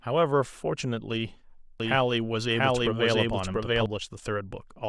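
From 1.80 s to 3.86 s the speech is a doubled audio track: a second, full-band copy runs roughly 0.7 s behind the first at about the same loudness, so two out-of-step streams of speech overlap. It most likely comes from the signal being picked up twice, once through a slower path. The copy has no reverb tail and starts and stops abruptly. On a spectrogram the harmonic patterns repeat, shifted right; the waveform shows matching envelopes offset in time.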